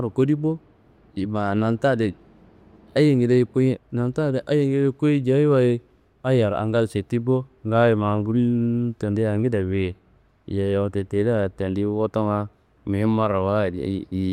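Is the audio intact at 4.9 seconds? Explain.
Yes, the speech at 4.9 seconds is intact, with no audible fault at that moment.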